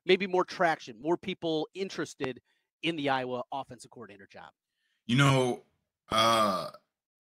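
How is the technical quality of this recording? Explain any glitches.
The recording has two brief glitches, a pop and a Bluetooth stutter.

Between 2.24 and 2.26 s, just after "more traction more people" and before "in the", a single loud pop sits about 15 dB above the speech. A voltage spike, likely from a connector, switch or static discharge, was added to the signal, and the speech continues under the sharp thump.

From 5.27 to 5.31 s there is a Bluetooth stutter. A packet arrived late or was lost, so the receiver replayed its last buffer of about 21 ms, which fits a single lost frame. The result is a short repeated slice before the speech resumes further along.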